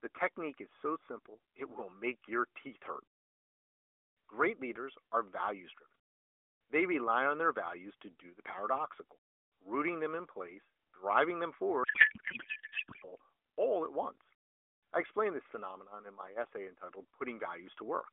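From 11.84 to 13.13 s, right after "in place driving them", a codec payload misread takes over. The AMR frames arrive octet-aligned but are unpacked as bandwidth-efficient. Every field lands in the wrong place. The speech turns to garbled noise and warble that barely tracks it, until "all at once I". The AMR narrowband mobile codec is audible throughout, with the band held to about 300 Hz to 3.4 kHz and light coding roughness, which fits the 12.2 kbps mode.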